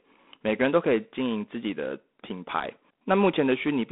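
From start to finish the speech has that G.726 ADPCM rasp: a harsh, gritty hiss riding on the voice and rising with its level, which fits 24 kbit/s coding. The band sits around 200 Hz to 3.6 kHz, with nothing above 3.8 kHz.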